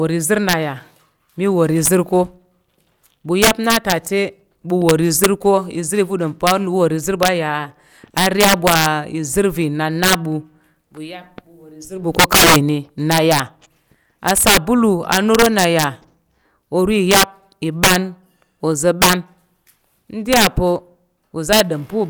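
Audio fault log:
Throughout: integer overflow. Loud moments in the speech break into violent cracks, far harsher and snappier than ordinary clipping. The signal is driven about 15 dB past full scale, and instead of being held at the ceiling, each peak that exceeds the largest integer wraps around to the opposite extreme. Only around one percent of samples go over, but every one of them flips across the entire range, producing those sharp cracks on the loudest syllables.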